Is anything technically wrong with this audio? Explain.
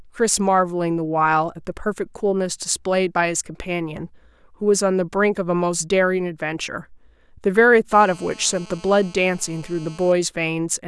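Yes. GSM phone buzz, 7.93 to 10.12 s: a nearby phone's 217 Hz transmit bursts get rectified, adding a steady, raspy buzz about 25 dB below the speech.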